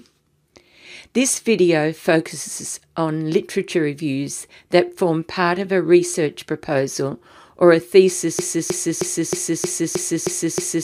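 At 8.39 s the sound falls into a broken-record loop. A 0.31 s fragment repeats exactly, back to back, eight times, and continues until the clip ends. The likely cause is a stall in the player, encoder or stream, which kept re-sending the last fragment it held, so whatever should have played after 8.39 s is lost. On a waveform or spectrogram, identical blocks recur every 0.31 s, with an abrupt seam at each restart.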